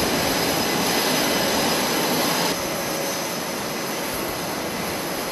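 No technical faults can be heard anywhere in the signal, and it comes through without any dropouts, distortion or level problems.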